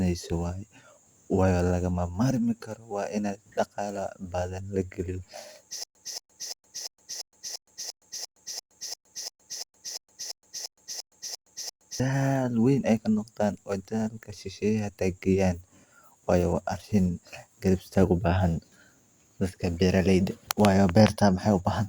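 From 5.84 s to 12.00 s the speech falls into a stutter with silent gaps. The same 228 ms fragment plays 18 times, each followed by about 117 ms of digital silence, so it returns at an even 345 ms pace. This is likely a stalled player or stream replaying its last buffered fragment at each retry before running empty, and the speech due in that span never arrives. Ordinary dropouts break fresh audio with irregular holes, but here the identical burst repeats on a fixed clock.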